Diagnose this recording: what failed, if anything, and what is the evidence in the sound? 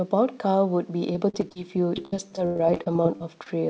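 The failure is in the network, ahead of the call decoder. Repeated packet loss gives the speech a choppy, robotic quality in two stretches. Five gaps fall between 1.13 and 1.56 s. Seventeen more fall between 1.96 and 3.49 s, the longest about 97 ms. Each hole is filled by stretching the last good sound, and the next hole arrives soon after. About a quarter of each stretch is synthetic fill. Nothing sounds above 8 kHz, which fits a wideband call codec such as G.722.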